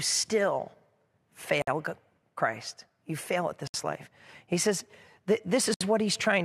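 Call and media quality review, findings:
Gap at a join of encoded pieces: silent dropouts at 1.62 s (55 ms), 3.67 s after "fail at" (67 ms), and 5.74 s (67 ms), repeating every 2.0 s. Encoder priming delay and last-frame padding were left untrimmed when the segments were joined. On the spectrogram they show as blank vertical bands with smeared edges.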